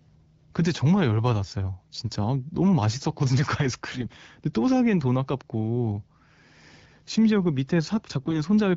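Speech clip carried over wideband AMR, with two short bursts of AMR bit errors, at 3.87 to 4.08 s and 8.20 to 8.41 s. Flipped low-priority bits misplace excitation pulses, so the voice keeps pitch and level but turns gargly and scratchy, showing on a spectrogram as smeared, noisy harmonics.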